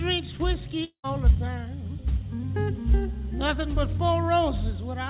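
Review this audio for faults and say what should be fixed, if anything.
A long network dropout runs from 0.84 to 1.06 s. About 200 ms of sound never arrives, and the receiver covers most of the gap by stretching the last received sound into a buzzy tail that decays, leaving roughly 90 ms of near-silence before the signal resumes further along, with the missing stretch simply gone. The likely cause is a burst of lost packets on the network. The call path's G.711 mu-law coding, with nothing above 4 kHz, is audible throughout. To prevent this, stabilise the connection or add redundancy or forward error correction so short loss bursts can be recovered.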